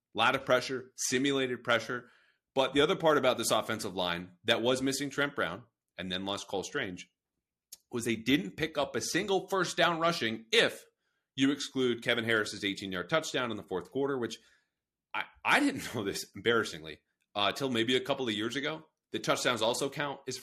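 No technical faults can be heard anywhere in this speech recording. There is nothing to place on a timeline, because no moment stands out as a fault.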